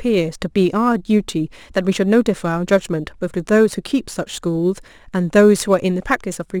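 From start to finish there's crude rate conversion, with samples just dropped to the nearest one and no filtering, at a ratio of about 1.09, which fits a 48 to 44.1 kHz change. That leaves a gritty, inharmonic fizz riding the speech, roughly 30 dB under it.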